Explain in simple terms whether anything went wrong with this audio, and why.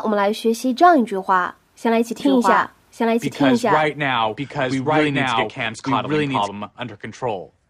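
Something did go wrong. From about 2.2 seconds to 6.48 seconds, the speech plays twice at once. This is a doubled audio track. A second copy runs about a second behind the first, and it is just as loud. It starts and stops suddenly, with no fading echo. The likely cause is the same sound being recorded again through a slower path, or an edit that left two copies out of step.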